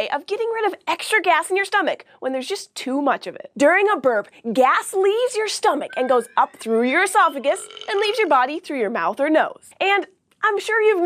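No technical faults can be heard anywhere in the audio.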